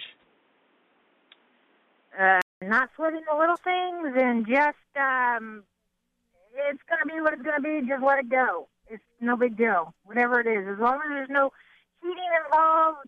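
Boxy audio from 0 to 2.62 s, likely an input switched to a poorer device: spectrogram empty above 3.8 kHz until a 200 ms gap.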